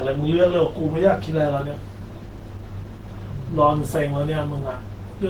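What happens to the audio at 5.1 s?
Low-bitrate audio saved at a high bitrate affects 5.1 s and the whole clip. The speech likely passed through a very low-bitrate encoding, around 16 kbit/s Opus, then was re-saved as a roughly 192 kbit/s MP3. Those first-pass artefacts remain, since the larger file cannot restore what was lost.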